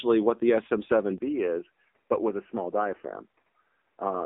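From the first moment the speech carries the damage of the AMR narrowband mobile codec. The sound is squeezed into a telephone band, with nothing above 3.8 kHz and little below about 250 Hz. Vowels have a buzzy, synthetic edge because the codec rebuilds the voice from a crude vocal-tract model fed by a few pulses per 5 ms. That heavy coarseness fits a low rate of around 6.7 kbps. A plain low-pass filter would only dull the top end, and the artificial buzz is what marks this as a codec.

At 1.18 s there is a 20 ms gap, and from there to the end the input appears to have switched to a poorer device, likely another microphone or a headset's call profile. The band narrows further, with nothing above 3 kHz, so the sound turns boxier and duller. It also becomes a few dB quieter and gains a faint new noise floor well below the speech. A change in the codec would affect the whole clip, while this one is a single step at one instant, marked by the brief silence and the sudden shift in tone and level.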